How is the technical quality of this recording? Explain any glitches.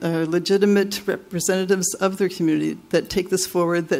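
Nothing stood out on listening to this recording; no glitches were heard.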